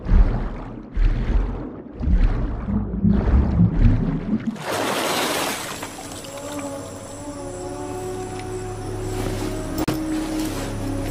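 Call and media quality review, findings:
Short hole, 9.84–9.88 s, about 35 ms long. Block of digital silence: audio drops straight to silence and back with no fade, both edges hard steps. Probable component: output rendering path. Mechanism: output buffer not filled in time, so a block of zeros went out instead of samples.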